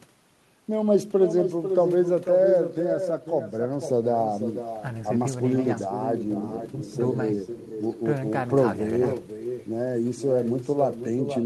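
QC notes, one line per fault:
Throughout: echo with no canceller. The far end's loudspeaker feeds its microphone and nothing subtracts it, so each phrase returns about half a second later, about 8 dB down and thinner; the waveform and spectrogram show a faded, delayed duplicate trailing every burst.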